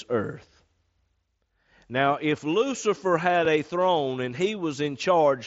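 At 3.45 s, just before "a throne and", there is a block of digital silence. The speech drops to silence for about 2.9 ms and then returns. The gap fits one missed 128-sample buffer, where the output was not filled in time. There is no fade at either edge. The hard cut to silence and back is heard as a brief tick or dip. The speech carries the band limit of the mSBC headset link, with nothing above about 7.7 kHz.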